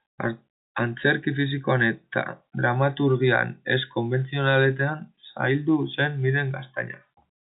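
No technical faults are audible.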